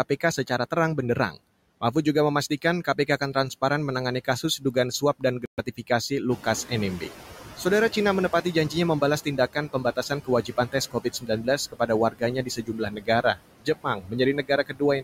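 Throughout the clip the background sinks between phrases and swells back under the speech. These are noise suppressor artifacts: the suppressor pulls down every band it judges to be steady noise, frame by frame, cutting the noise by about 15 dB.

From 4.25 to 6.1 s, parts of the speech turn faint and swallowed, with roughly a fifth of a second in total affected. This is speech cut by the noise suppressor. It mistook some speech energy for noise and lowered it by up to about 15 dB.

Within that stretch, from 5.46 to 5.60 s, the sound drops to 121 ms of dead silence and then resumes. This gap is a Bluetooth stall, likely from interference delaying packets until the headphones' buffer emptied and playback waited for the resent data.

Around 6.5 s the room noise jumps by about 13 dB. From 6.3 to 7.17 s it comes through louder before settling down over 870 ms. This is the noise suppressor catching up. 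Its noise estimate lagged the sudden rise, so reduction was weak at first and then deepened to about 11 dB as it adapted.

From 9.0 s to the end at 15 s, speech again sounds swallowed in places, with word edges and softer stretches faded, roughly two seconds in all. This is speech cut by the noise suppressor once more, pulling speech down by up to about 19 dB along with the background.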